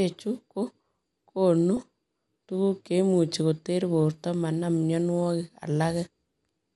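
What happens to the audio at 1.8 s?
From 1.77 to 1.83 s, bit errors slip past the error correction into the MP2 data and knock single sub-bands' levels askew, producing a brief DAB burbling: short blips of noise and jumps in level within single sub-bands. Throughout, starved upper sub-bands give the speech the dull, gurgling graininess of MP2 compression, likely from a low bitrate around 80 kbps.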